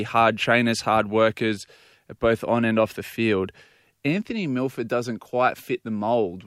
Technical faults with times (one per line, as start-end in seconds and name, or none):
none